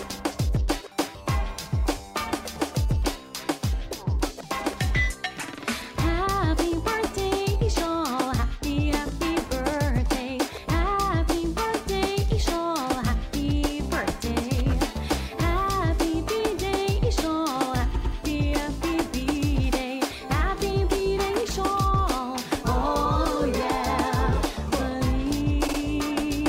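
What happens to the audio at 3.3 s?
Nothing goes wrong at 3.3 s: the audio plays through that moment intact, with no dropout, click, distortion or other fault.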